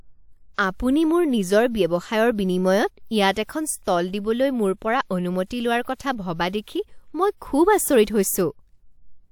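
Right at the start, around 0.54 to 0.58 s, there's pre-echo: a short hiss creeps in about 45 ms ahead of a sharp onset in the speech, so the attack loses its bite. It happens again at 5.95 to 5.99 s, with roughly 49 ms of smear. The codec's block-wide quantisation noise, sized for the loud transient, leaks into the quiet stretch just before it.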